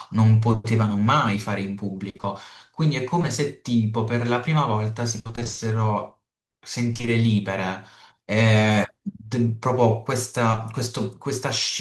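Speech with brief smears or wobbles at 0.51 s, 10.51 s and 10.55 s, each a short concealed packet loss where about 20 ms of missing audio was patched by extending the preceding sound. Choppy stretches at 2.09–3.25 s, 5.19–5.59 s and 6.93–7.09 s are repeated packet loss (robotic sound). There, holes of up to 60 ms recur, with over half of the 5.19 s stretch concealed.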